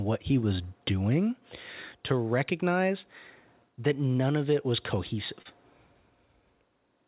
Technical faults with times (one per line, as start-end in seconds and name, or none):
5.42-5.48 short concealed packet loss